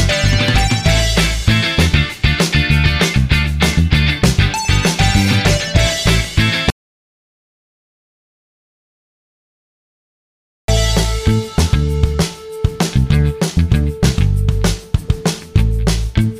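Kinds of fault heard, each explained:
Audio dropout to silence: the sound cuts off at 6.70 s and returns at 10.68 s, about four seconds of dead digital silence with no room tone, likely a lost input or mute.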